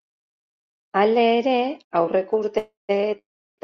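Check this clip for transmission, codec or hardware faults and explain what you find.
Two call audio freezes occur in this speech, from 2.58 to 2.91 s and from 3.19 to 3.60 s, both following "ere aurreko". Each is likely a jitter-buffer underrun: the last sound is stretched into a fading buzz or hiss, then silence, for about 150 ms and 350 ms respectively. The speech then resumes intact but later, with nothing lost.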